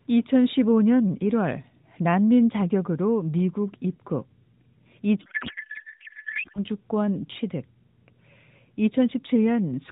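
A codec payload misread in this AMR narrowband speech clip, with sender and receiver disagreeing on frame packing (the sound points to octet-aligned frames read as bandwidth-efficient), scrambles the decoded fields from 5.22 to 6.64 s, so speech becomes garbled warbling noise barely tracking it.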